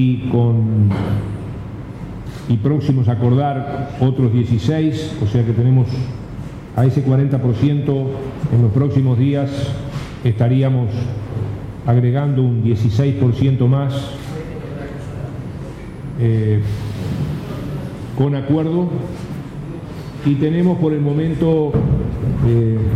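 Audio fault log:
No faults detected in this audio.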